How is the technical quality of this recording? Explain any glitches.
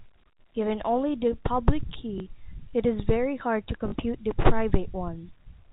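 The recording has two brief packet-loss glitches, heard through telephone-band G.711 audio that stops at 4 kHz. Packet loss with last packet repeated occurs at 2.18–2.20 s and 3.88–3.92 s. Lost audio was replaced by replaying the previous chunk, so you hear a small blip lasting 20 ms, then a robotic stutter lasting 40 ms. That fits one and two 20 ms packets.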